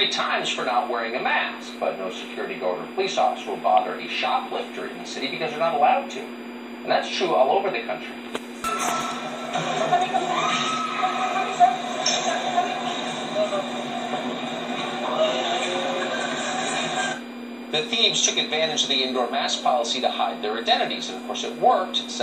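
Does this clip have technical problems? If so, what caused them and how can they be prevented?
Yes. A faint, steady high whistle runs throughout, wavering between 2.39 and 2.42 kHz, roughly 30 dB below the signal. This is switching supply whistle. Prevent it with a linear or well-filtered supply, kept away from the audio chain.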